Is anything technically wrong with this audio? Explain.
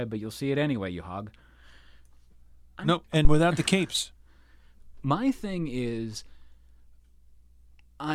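Yes. At 3.25 s there is a phantom power thump, lasting to about 3.43 s. A supply was switched on or off on the live input, and the voltage step passed through the coupling capacitors. It sounds like a deep thump peaking at about −5 dBFS and decaying in roughly 42 ms.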